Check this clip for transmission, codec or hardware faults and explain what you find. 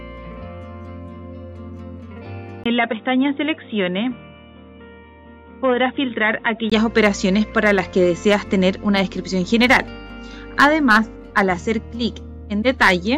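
One fault here, a likely input switched to a poorer device. From 2.64 to 6.72 s the sound dulls, with nothing above 3.8 kHz, drops a few dB, gains a faint new noise floor, and a brief 20 ms gap marks the switch in.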